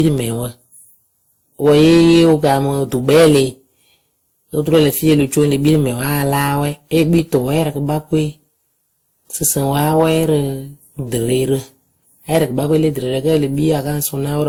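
Right from the start and all the way through, the speech is hitting hard clipping. It's being pushed about 12 dB past what the stage can carry, so the peaks get sliced flat. Only a small slice of the samples, around two percent, actually go over, but that's enough. Every loud syllable picks up a crackly, gritty edge, because those squared-off tops spray extra harmonics high up the spectrum.

Layered on top of that, for the whole clip, there are two flavours of compression artefact sitting together. The top end stops around 20.2 kHz. The likely cause is transcoding between lossy codecs: an older WMA-style encode at something like 96 kbit/s, then re-encoded to Opus at a lean rate, around 32 kbit/s. That second codec spends its bits chasing the first codec's artefacts and then adds its own on top.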